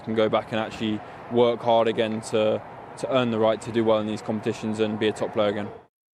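No technical faults can be heard anywhere here.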